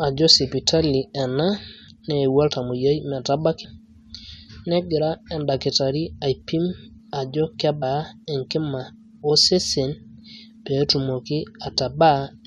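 At 3.63 s and 7.81 s, compressed frames are skipped. Whole frames drop out, so the speech jumps ahead roughly 100 and 70 ms.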